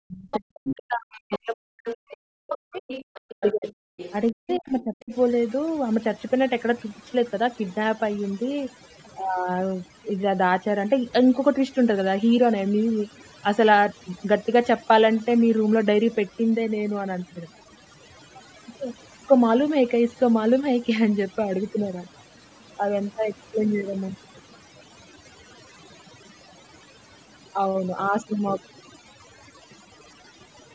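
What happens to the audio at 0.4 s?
At 0.4 s the talker's voice sits inside a stretch of speech suppressed in double talk that runs from the start to 2.92 s. The voice sinks sharply, at its deepest by about 40 dB, with roughly two seconds of the span affected. The likely cause is an echo canceller facing both sides talking at once: unable to separate the talker from the loudspeaker echo, it pulled the whole signal down. Unlike overdone noise removal, these are gross dips of the voice itself.

Just before that moment, from 0.31 to 0.39 s, a brief scrap of the other side's voice leaking through is heard, roughly 10 dB below the talker. It is likely loudspeaker sound that the echo canceller failed to remove from the microphone. What separates it from the suppression is that this is an added second voice, not a loss of the first. It ends right as 0.4 s arrives.

Overdone noise removal also colours this moment, as it does the whole clip. 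Frequency bands close to the tool's noise estimate are cut hard, so the background drops and breaks up into twinkling specks, and quiet parts of the voice go with them. This damage is steady, spread across the spectrum and sparkly, unlike the sudden deep holes of the double-talk suppression.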